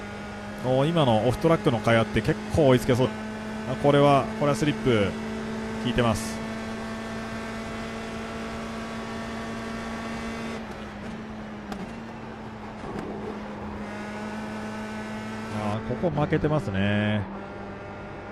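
At 3.05 s the audio makes a skip ahead. About a second of sound was dropped. The two sides join almost directly, with no gap.

From 3.15 to 4.91 s a jitter buffer speed-up follows. Short pitch-period pieces are cut repeatedly, about a fifth of a second in all. The sound runs 11% fast, at unchanged pitch, and feels hurried.

From 15.74 s to the end, de-emphasis is applied wrongly. A smooth treble cut reaches about 13 dB at 10 kHz relative to 1 kHz. The sound turns dull and muffled.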